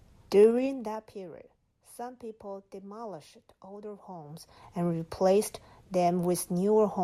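Gain was stepped in 2 dB increments without smoothing, producing zipper noise. From 0.4 to 1.16 s, a level drop of about 15 dB ticks audibly. From 4.16 to 4.72 s, between "some people demolished older" and "and replaced", a similar rise zips.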